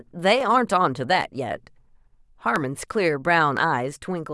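Sharp single clicks cut through the speech at 0.41, 2.56 and 3.57 s, likely dropped samples, where a fraction of a millisecond vanishes and the waveform jumps abruptly.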